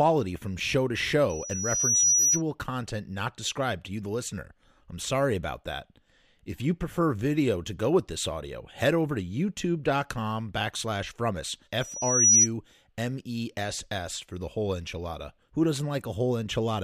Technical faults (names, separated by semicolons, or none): loudspeaker feedback squeal